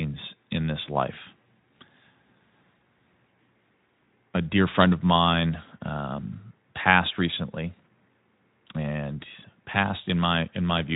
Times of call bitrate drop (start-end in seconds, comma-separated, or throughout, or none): none